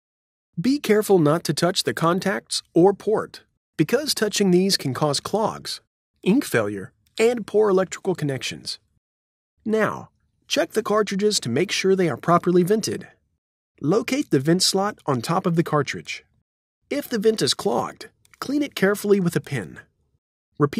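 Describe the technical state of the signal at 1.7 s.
At 1.7 s the signal is intact, with no dropout, distortion or other fault to be heard.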